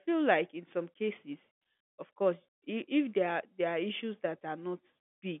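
Nothing stood out on listening, with the speech carrying the narrow band expected of G.711 telephone coding, topping out at about 3.7 kHz.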